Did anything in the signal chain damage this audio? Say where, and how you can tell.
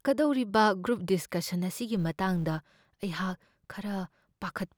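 Yes. From 1.97 s on, a 200 Hz buzz tracking the speech level shows a processing filter restarted on every block from silence; dropouts would sound irregular instead.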